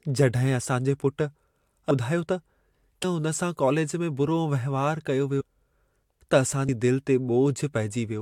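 At 5.40 to 5.42 s, and again at 6.68 s, compressed frames are skipped: the speech jumps ahead by roughly 0.4 s, then about 0.1 s, consistent with around 15 and 4 lost 21.3 ms frames.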